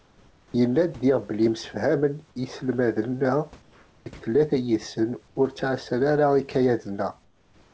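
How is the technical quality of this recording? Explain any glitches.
The speech carries audible transmission artefacts: in the pauses the room background is repeatedly swapped for synthetic noise, and one word begins abruptly. Nothing is heard above 8 kHz, which fits a G.722 call link, and the room's own hiss sits about 33 dB below the speech.

Comfort noise in place of the background: from 0.00 to 0.54 s, 3.62 to 4.06 s, 5.28 to 5.36 s (just before "ur ttɛassan ara") and 7.24 to 7.73 s, the natural room texture gives way to a flat, featureless hiss, slightly quieter each time: about 4, 3, 1 and 5 dB down. The likely cause is discontinuous transmission. The sender stopped sending during silence, and the receiver filled the gap with generated noise that roughly matches the background's level and shape.

Onset clipped by the voice detector: at 4.04 s, right where the comfort noise ends, the returning speech starts with a hard edge, missing about 20 ms of its soft beginning. 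The sender's voice detector was likely slow to notice that sound had resumed, so those first moments were never transmitted, and the receiver kept playing synthetic noise until real audio arrived.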